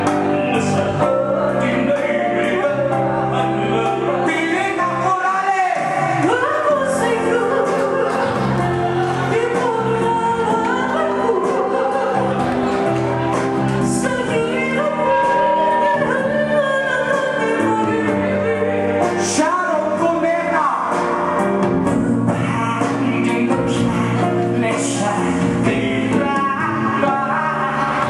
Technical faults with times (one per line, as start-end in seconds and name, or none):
14.81-15.99 loudspeaker feedback squeal